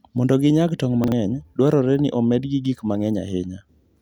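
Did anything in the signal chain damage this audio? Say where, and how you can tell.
Yes. Between 1.04 and 1.12 s, right after "ginyag tong'" and just before "dwarore ni omedgi gik", the speech briefly jumbles. This is chunks out of order at the driver or buffer stage: a 40 ms block was written one block late, so two adjacent 40 ms pieces play swapped, leaving three hard joins. Unlike a dropout or packet loss, nothing is missing and no gap or smoothed-over fill is heard.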